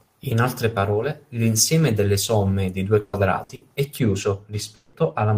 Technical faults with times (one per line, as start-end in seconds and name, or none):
3.01-3.16 burst of packet loss
3.43-3.64 burst of packet loss
3.99-5.37 de-emphasis applied wrongly
4.75-4.96 long network dropout